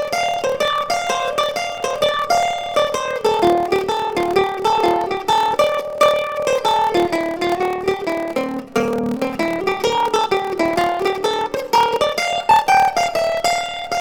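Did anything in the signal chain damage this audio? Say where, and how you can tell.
Yes. At the driver or buffer stage there is a block size mismatch (padded): each block written is shorter than the block read, and the shortfall is zero-filled. A steady 38.3 Hz buzz runs throughout, which fits 1024-sample writes, and the sound plays at 0.889 speed with its timbre unchanged.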